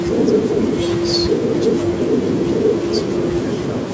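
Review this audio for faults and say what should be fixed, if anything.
Nothing here needs fixing; no faults can be heard.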